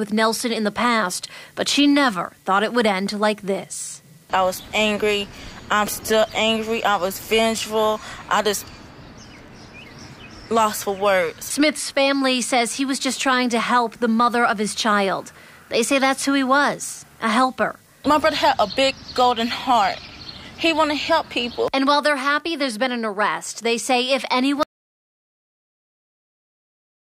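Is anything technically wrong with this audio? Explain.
Yes. There is an audio dropout to silence from 24.63 s to the end of the clip. The input signal was likely lost, through a disconnected device, a failed link or a stray mute, while the recording carried on writing silence. The sound cuts off abruptly mid-flow, and the final 2.4 seconds are complete silence with no room tone or background at all, so whatever followed is simply missing.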